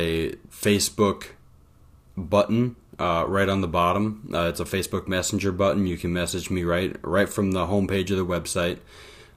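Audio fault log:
0.13–9.36 s, clock slip clicks: faint rattling ticks about every 40 ms, likely unsynchronised clocks roughly 500 ppm apart dropping or repeating single samples.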